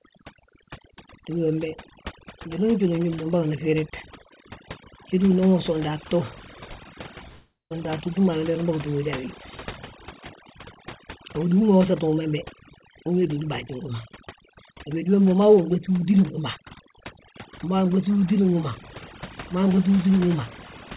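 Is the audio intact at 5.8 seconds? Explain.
No. At 5.8 seconds the speech carries overdone noise removal, which runs through the whole clip. The suppressor pushed quiet frequency bands near its noise estimate down hard, taking soft parts of the voice with them. Pauses drop to near silence with twinkling specks. Nothing is heard above 4 kHz, which fits a narrowband call path.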